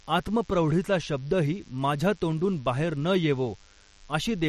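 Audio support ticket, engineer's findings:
DECT cordless phone buzz throughout speech, around 35 dB below it. Thin 100 Hz buzz with many harmonics, from 10 ms radio bursts rectified in the audio circuit, unlike smoother mains hum.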